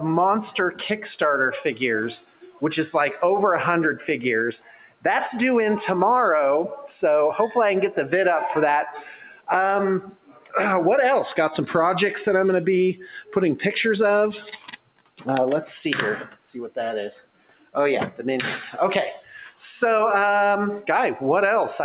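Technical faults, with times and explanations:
Throughout, noise suppressor applied to music or sounds: the level pumps and thins, swinging by around 10 dB, as a speech-tuned suppressor treats steady tones and tails as noise.
2.21–2.62 s, 3.97–5.05 s, 8.95–10.55 s, 12.95–13.36 s, 14.38–15.22 s, 16.27–16.48 s, 17.16–18.19 s, 19.17–19.59 s, sound cut by the noise suppressor: sustained or decaying sound sinks by about 15 to 18 dB for up to a second. The suppressor misjudges it as noise and clamps it down.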